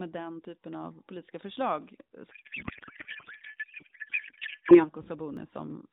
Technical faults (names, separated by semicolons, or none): dropped buffer (overrun); codec payload misread